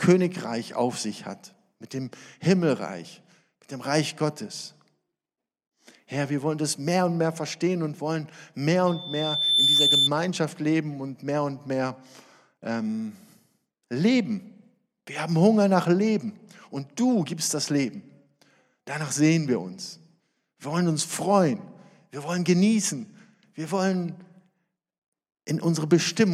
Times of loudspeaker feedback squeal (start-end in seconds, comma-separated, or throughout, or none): 8.87-10.10